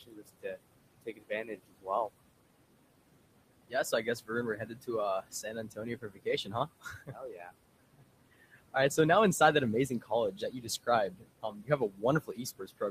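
The noise suppressor is working the whole way through this speech clip, pulling steady background down by about 21 dB frame by frame. The room noise, sitting about 13 dB under the talker, ducks away in the gaps and comes back up under the speech.

It also mistakes bits of the speech itself for noise, and you get speech cut by the noise suppressor six times. The spans are 0.01 to 0.58 s, 1.02 to 1.88 s, 3.68 to 4.89 s, 5.22 to 7.51 s, 7.97 to 8.98 s (ending just before "now inside that"), and 9.89 s to the end. Soft consonants and word endings get dragged down by up to about 21 dB, so they sound swallowed. In most spans only a fraction of a second is affected, but the 5.22 to 7.51 s stretch loses around a second and a half.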